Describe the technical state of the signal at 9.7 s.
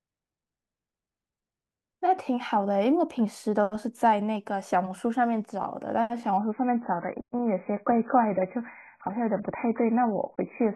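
At 9.7 s you're inside a stretch where the adaptive stream has dropped to a lower bitrate, running from 6.38 s to the end of the clip. The speech switches abruptly, with no gap, to a much thinner version: nothing above 2.5 kHz survives, so it turns dull and muffled, with a smeary, warbly codec texture. That fits the player falling back from roughly 96 kbit/s AAC to something near 12 kbit/s after the connection slowed.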